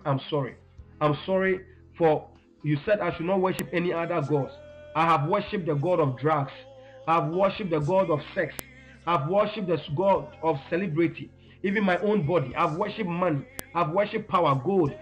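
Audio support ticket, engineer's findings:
File header played as audio: chunk joiner or stream assembler not stripping WAV headers, so header bytes decode as samples. Sharp, loud click at 3.59 s, 8.59 s and 13.59 s, every 5 s, regardless of the surrounding signal. Each is a brief snap of about 1 ms.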